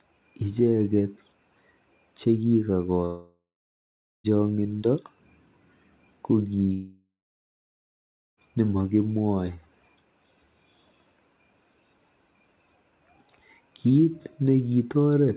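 At 3.05 s the speech cuts out until 4.27 s, trailing into a fading buzz or hiss before 0.78 s of silence. It happens again at 6.73 s to 8.4 s, this time with 1.25 s silent. That's likely a long network dropout, and the missing audio never comes back.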